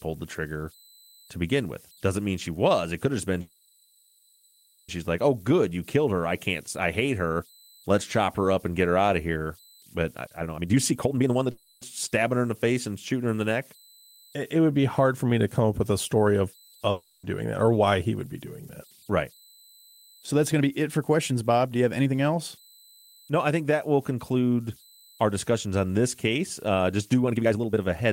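Throughout the speech there is a faint, steady tone around 4 kHz, about 32 dB below the signal. These are converter idle tones: a delta-sigma converter running without dither settles into repeating bit patterns on low-level input, and those patterns produce a fixed tone. It is most exposed in pauses and gives a grainy edge to quieter passages.

From 3.41 to 4.90 s, after "could have just been", the audio stalls into a decaying fill for about 1.5 s before resuming at "like oh". This is a call audio freeze, likely caused by delayed packets draining the jitter buffer. The receiver stretched the last sound to cover the wait. Nothing is lost, but the rest of the clip now runs about 1.5 s late.

From 10.11 to 11.51 s the speech is hurried to 167% of normal speed at unchanged pitch. This is a jitter buffer speed-up: the receiver cut roughly a second of audio in short pitch-period slices to shed excess buffered delay. 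Immediately afterwards, from 11.51 to 11.83 s, a second, shorter call audio freeze inserts about 0.3 s of fading fill before "stabbing her in the".

At 16.91 to 17.25 s a long network dropout replaces 0.32 s of audio with a fading fill. When the audio returns, that stretch is missing rather than delayed, which points to packets that never arrived.

Two more jitter buffer speed-ups follow. From 20.00 to 22.13 s the audio runs at 110%, a mild rush that drops about 0.2 s. From 27.23 to 28.01 s, after "just do", it runs at 161% and loses about half a second.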